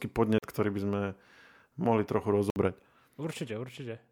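At 0.38 s the speech drops into a block of digital silence lasting about 43 ms, until 0.43 s. A second block follows at 2.50 s, running about 59 ms to 2.56 s. In each case the output buffer was likely not filled in time, so zeros went out instead. The first gap fits a 2048-sample buffer. The sound stops and restarts with no fade. Each gap is heard as a short hole.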